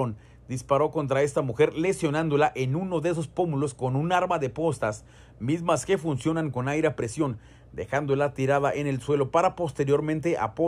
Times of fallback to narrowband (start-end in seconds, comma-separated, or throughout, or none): none